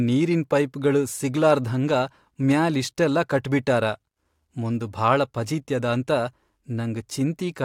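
Throughout, a resampler restarted on every block converts 44.1 kHz to 48 kHz in 40 ms chunks. Each edge errs. A 25 Hz tick-buzz rides the speech.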